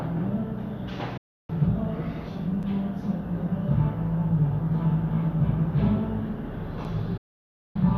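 Digital broadcast dropout from 1.17 to 1.50 s: the receiver loses good frames and mutes. The sound fades out over about 8 ms and leaves a hole of roughly 0.31 s, which fits about thirteen lost 24 ms frames. Whatever played during that gap is gone.

Block of digital silence at 2.63 s: a 5 ms stretch of samples drops to silence, most likely because the output buffer wasn't filled in time. With no fade at either edge, the hard cut and return produce a sharp tick.

Block of digital silence at 6.84 s: another 5 ms run of silence, heard as the same abrupt click.

Digital broadcast dropout from 7.17 to 7.76 s: the receiver mutes again after the same 8 ms fade. This longer hole lasts about 0.58 s, consistent with roughly two dozen failed frames, and the sound returns near the end of the clip.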